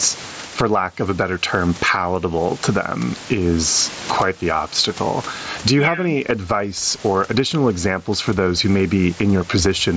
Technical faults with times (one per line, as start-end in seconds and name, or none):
0.00-9.97 gain pumping